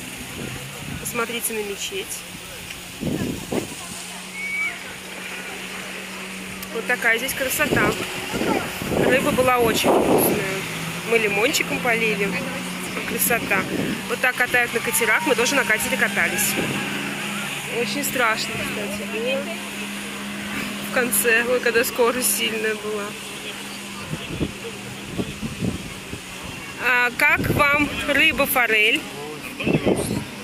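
Nothing in the audio stood out as a fault on listening.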